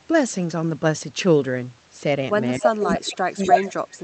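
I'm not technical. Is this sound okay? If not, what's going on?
No. From 2.58 s to the end, the speech turns much quieter. That is likely speech suppressed in double talk: both sides talked at once, and the echo-removal system lowered this talker along with the echo it was trying to remove.

There is also echo leak: a copy of the sound returns about a quarter second late, at 2.64 to 2.68 s, 2.88 to 2.94 s and 3.43 to 3.58 s. The first copy is about as loud as the talker, the second is faint, and the third is a little louder.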